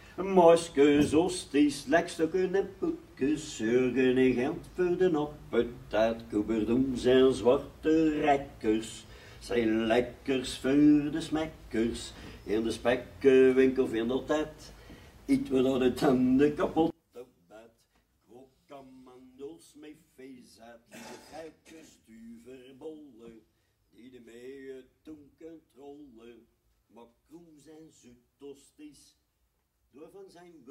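From 16.9 s to the end, the sound collapses in mono, dropping by about 24 dB. What remains is faint. The likely cause is one channel inverted. Reversed polarity makes the shared centre content cancel when the channels are summed.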